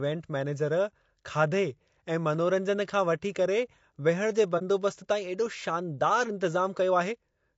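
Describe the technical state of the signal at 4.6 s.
AAC frame loss with muting, from 4.58 to 4.62 s, just after "वठी करे विहण जे": the decoder zeroed a missing stretch of spectrum, which sounds like a single lost frame. The overlapping windows fade the speech out and back in, leaving a brief dip.

Low-delay AAC compression likely accounts for the plainly audible rough, grainy texture around this moment, consistent with AAC-ELD near 32 kbps. At this low bitrate, noise fills the gaps between the voice's harmonics and the top band sounds thin or synthetic.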